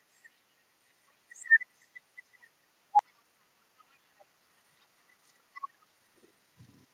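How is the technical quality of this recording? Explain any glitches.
The recording has two glitches around the midpoint, so the technical quality takes a hit there.

First, a skip ahead at 2.99–3.01 s. Roughly a second of speech just isn't there, and playback jumps straight to later audio with no gap filled in. It happens when a chunk gets dropped, either lost in transit or thrown out by an overflowing jitter buffer while newer audio was already queued. You hear an abrupt splice where the two sides butt right up against each other.

Then, from 3.09 s to the end, there's a jitter buffer speed-up. The buffer was holding more audio than it wanted, so the receiver kept trimming out tiny pitch-period-sized slices to drain it, around 0.4 s in total. Pitch stays put but the speech runs at about 111% speed, so the back half sounds a bit rushed and clipped along.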